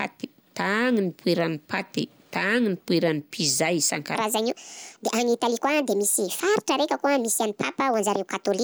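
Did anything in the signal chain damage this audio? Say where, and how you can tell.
Yes. From 4.15 s to the end at 8.64 s, the speech runs at 1.44 times its recorded speed, so it suddenly sounds hurried and pitched up by about seven semitones. Speed and pitch jump together, which points to a playback or resampling stage that likely applied the wrong sample-rate clock to that section. On a spectrogram, the harmonics and formants jump upward by that ratio at 4.15 s, and syllable spacing in the waveform tightens.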